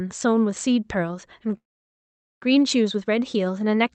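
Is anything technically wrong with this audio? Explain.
Yes. A call audio freeze runs from 1.57 to 2.44 s. It was likely caused by packets stalling in transit until the jitter buffer ran dry. The receiver stretched the last sound into a brief fading tail, then held almost complete silence for about 0.81 s. When the packets arrived, the speech resumed where it had stopped, with nothing lost, but everything after it now lands about 0.84 s late. Across the call path, the audio shows a top end limited to roughly 8 kHz, consistent with Opus coding.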